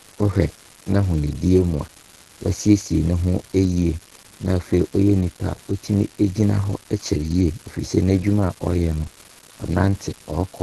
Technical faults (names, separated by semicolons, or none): unreliable data bit; Opus compression